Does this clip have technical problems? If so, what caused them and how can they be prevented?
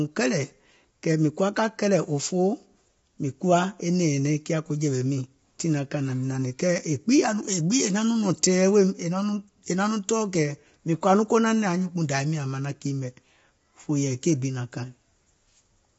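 Yes. Throughout, the speech is rough and grainy, likely from low-delay AAC compression: short frames smear pitch harmonics, and the damage fits a low bitrate near 24 kbps. A spectrogram shows noise between harmonics and a hard ceiling at 7.7 kHz. Encoding at a higher bitrate prevents it.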